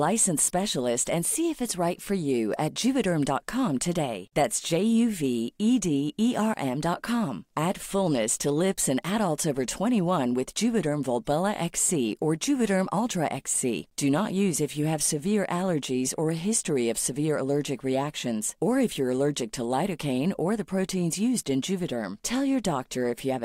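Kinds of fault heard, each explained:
Block of digital silence: at 6.54 s the speech drops out for about 20 ms, where the samples are replaced by silence, the kind of gap left when an output buffer is not filled in time. Because the sound stops and restarts with no fade, at this length it registers as a sharp tick or tiny hole. The waveform shows a near-flat line between two abrupt edges, and a spectrogram shows a thin blank vertical strip.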